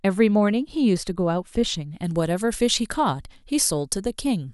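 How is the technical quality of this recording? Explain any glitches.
The speech turns thin, bright and hissy with exaggerated sibilance from 2.04 s to the end. This is pre-emphasis left on: the treble boost applied for transmission was never undone, leaving 10 kHz about 14 dB above 1 kHz, which fits the FM 75 µs curve.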